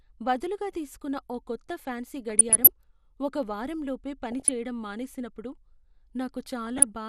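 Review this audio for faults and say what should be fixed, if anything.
The whole speech clip carries MP2 compression. The top end is dull, with a granular, gurgling edge as upper sub-bands drop out and the remaining bands are coarsely quantised. The degree of damage points to roughly 80 kbps, likely from a low-rate MPEG Layer II encode. Encoding at a higher bitrate would prevent it.

DAB burbling occurs three times. The first is at 2.16–2.69 s, after "బదులుగా తీసుకున్న ఓ కొత్త" and before "ఒక వారం లోపే". The second is at 4.32–4.50 s, before "చెయ్యడం మానేసినప్పుడు". The third is at 6.67–6.83 s. Short blips of noise land in single sub-bands, consistent with bit errors at a fraction of a percent corrupting samples and scale factors. Better reception or a wired source feed would prevent it.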